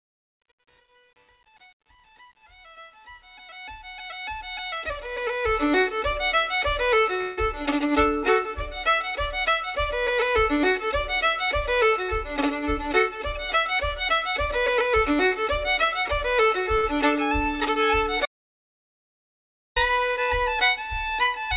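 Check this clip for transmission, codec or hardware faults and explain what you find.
Four faults stand out, all heard through a narrowband call path whose band stops at 4 kHz, which fits 64 kbps G.711 mu-law.

Truncation distortion on a fade runs from the start to 5.79 s and is worst from 0.0 to 5.17 s. The quiet fade sounds gritty and grainy, with the waveform stepping instead of tapering smoothly. A digital fade or gain stage kept too few bits, which fits an 8-bit stage, and added no dither. Near the smallest level steps, the signal collapses into a few coarse square steps.

A call audio freeze sits at 7.21 to 7.38 s. The sound stalls and is stretched into a fading buzz or hiss for about 164 ms, then carries on from where it stopped. The likely cause is packets held up in transit until the jitter buffer ran empty, so the receiver extended the last sound. Nothing is missing. Instead, the clip gains a 164 ms gap, and everything after it arrives 164 ms later.

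A jitter buffer speed-up runs from 12.03 to 15.46 s. The audio plays at about 104% speed while its pitch stays unchanged. The receiver was holding more audio than it aims for and cut its delay by repeatedly removing short slices of one or a few pitch periods. Across the stretch, around 150 ms is trimmed out. The rise sits just below where the pace would start to feel rushed.

An audio dropout to silence lasts from 18.26 to 19.76 s. The sound cuts out mid-flow, leaving about 1.5 s of dead silence with no background noise, then returns abruptly. The likely cause is a loss of the input, through a disconnected device, a failed link or a stray mute, while recording or encoding continued to write silence. Whatever sounded during that 1.5 s is gone.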